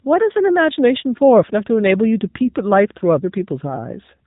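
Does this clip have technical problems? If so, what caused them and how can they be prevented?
Yes. AMR narrowband mobile codec damage runs throughout. Nothing above 3.8 kHz survives, and the speech sounds buzzy and synthetic, which fits a low bitrate near 8 kbps. Prevent it by using a wideband codec or a higher bitrate mode.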